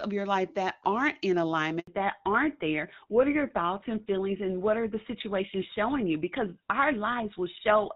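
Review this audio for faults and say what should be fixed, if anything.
Two faults, both at the same moment, and both are worth fixing.

At 1.79 s, right after "life that aren't in", there's a handover gap. The speech cuts out for 80 ms, through to 1.87 s, because the call was switching networks and no speech frames came through while it did. Whatever was said in that stretch is gone for good, not just muffled. To prevent it, tighten the handover so the new link is up before the old one drops, and let jitter buffering or frame concealment cover the switch.

From 1.87 s to the end there's a fallback to narrowband. The call drops out of HD Voice at about 23.85 kbit/s AMR-WB and carries on what sounds like GSM full rate at 13 kbit/s. Nothing above 4 kHz makes it through after that point, so the speech goes noticeably duller and a bit rougher than the clean wideband opening. To prevent it, make sure the target network and the handover negotiation support AMR-WB, so the call stays wideband instead of falling back to the legacy codec.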